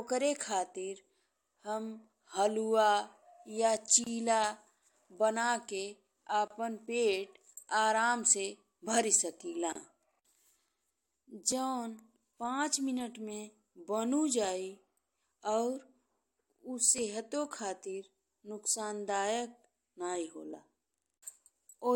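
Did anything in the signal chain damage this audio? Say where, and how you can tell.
Yes. At the codec stage, separately encoded pieces were joined without trimming the encoder's start-up delay and final-frame padding. This causes a gap at a join of encoded pieces at 4.04, 6.48 and 9.73 s: short silences of about 25 to 30 ms with smeared edges, after which the speech resumes where it stopped.

At 11.52, 14.44 and 16.98 s there is a small forward jump and no silence. A few milliseconds of speech are lost each time, and roughly twice as much at 16.98 s. The likely cause is a dropped buffer (overrun) in the driver, which splices the two sides of the lost piece directly together.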